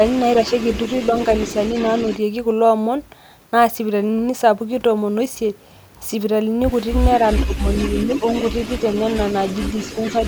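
Speech with two faults. An echo leak runs from 0.07 to 2.17 s and again from 7.11 s to the end: a distinct delayed copy of the speech arrives about 445 ms later in the first stretch, roughly 20 dB below the direct sound, and about 450 ms later in the second, stronger at roughly 15 dB down. The likely cause is a far-end loudspeaker whose echo canceller let part of its microphone pickup return down the line. A discrete repeat nearly half a second behind marks this as echo rather than room reverberation, which would smear into a continuous tail. Inside the second echo stretch, speech suppressed in double talk shows as two level dips: a deep one of roughly 15 dB between 7.45 and 7.68 s, and a shallower one of roughly 5 dB somewhere between 7.9 and 8.45 s. Together they last only a fraction of a second. This is likely the canceller turning everything down while both sides overlapped. It differs from a packet dropout because the speech ducks instead of falling to silence or glitching, and because it lines up with the returning echo.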